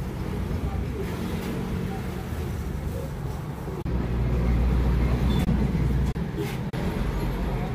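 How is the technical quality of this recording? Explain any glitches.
There is one glitch, a case of compressed frames skipped at 5.46 s. A short run of encoded frames was missing or rejected by the decoder, so about a tenth of a second of audio never plays, which fits roughly four frames of 23.2 ms each. The sound jumps forward at that point.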